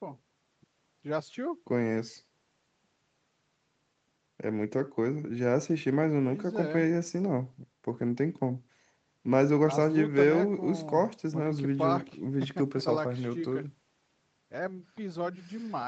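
No technical faults can be heard in this speech recording.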